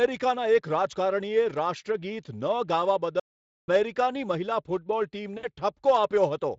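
At 3.20 s the speech cuts off mid-flow and the output stays silent until 3.68 s, a gap of about 480 ms. This is a playback stall, most likely the player running out of buffered data or its output thread being blocked, so nothing reached the sound device until it recovered. On a waveform the signal drops abruptly to a flat line and later resumes just as sharply. A spectrogram shows a clean vertical band of blank across all frequencies.

From 5.37 to 5.46 s, about 60 ms of the stream is missing, which fits three lost 20 ms frames. This is VoIP packet loss concealed by the speech codec. The Speex decoder fills the hole by carrying forward its last pitch and spectral envelope while lowering the gain, so the sound is stretched into an extrapolated fill that fades rather than going silent. The light Speex coding damage is present on both sides of the gap. On a spectrogram the filled stretch dims, and the waveform shows a decaying stretch.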